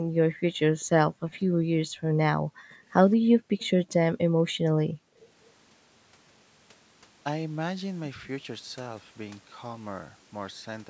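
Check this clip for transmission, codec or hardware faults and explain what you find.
The clip is speech from a call, and it shows echo-canceller faults of three kinds.

Background gated by the echo canceller: from 0.02 to 0.44 s, 1.08 to 1.27 s and 2.36 to 2.78 s, the room sound drops out. The canceller turned the microphone down hard while the loudspeaker played. The dips reach about 40, 36 and 40 dB. Each lasts a few hundred milliseconds.

Echo leak: a delayed copy of the speech trails it by 206 ms, from 0.8 to 1.38 s and from 2.7 to 3.7 s. The first stretch is very faint. The second is clearly louder. This is likely loudspeaker sound that the far-end canceller failed to remove and sent back.

Speech suppressed in double talk: the talker's speech dips from 1.73 to 2.01 s, from 3.22 to 3.28 s and from 4.4 to 5.19 s. The short drops take out brief pieces. The first dip is moderate, the second slight, and the last deepest. 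This is likely the canceller ducking both sides while they overlapped.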